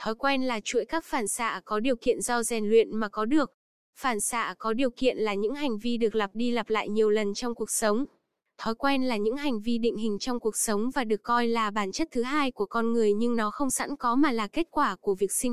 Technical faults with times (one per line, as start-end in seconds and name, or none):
none